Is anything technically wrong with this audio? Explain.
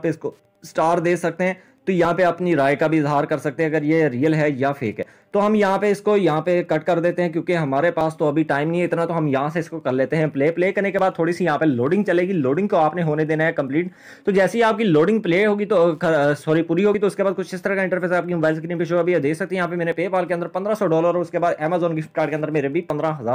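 Yes. At 2.05, 5.03, 8.01, 10.99, 13.97, 16.94, 19.92 and 22.90 s there is audio missing between chunks: a brief sliver of sound, roughly 20 ms, skips out every 3 s, likely lost as each chunk closes and the next opens. The waveform shows abrupt splices with no silence, and the spectrogram shows thin vertical seams.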